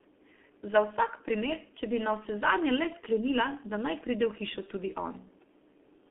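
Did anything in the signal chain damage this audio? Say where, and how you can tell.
Yes. Throughout, the speech went through a G.723.1 codec stage. The band is confined to roughly 250 Hz to 3.4 kHz, and the heavy hoarse, muffled texture with smeared consonants fits a roughly 6.3 kbit/s low-rate voice model that updates too slowly between frames.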